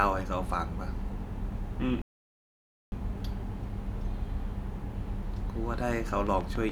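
At 2.02 s the speech cuts to silence for about 0.9 s, a playback stall, likely from the player running short of data, before resuming at 2.92 s. From 6.27 s to the end at 6.71 s, a train of clicks ticks at a regular 7 per second, standing roughly 10 dB above the speech, likely from electrical interference or a faulty connection.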